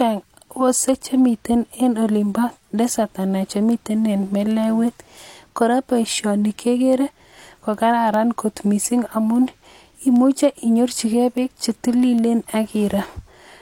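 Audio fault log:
0.48–13.40 s word clock ticks. Sharp ticks recur about every 0.4 s, some 30 in all, uneven in strength. The receiving device runs on its own clock, off by around 50 ppm. Each slip drops or repeats a single sample.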